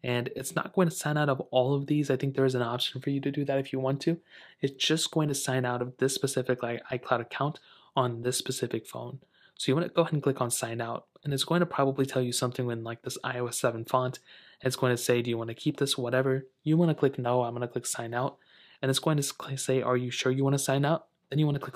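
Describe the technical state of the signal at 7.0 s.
The signal at 7.0 s is intact, with no technical fault present at that moment.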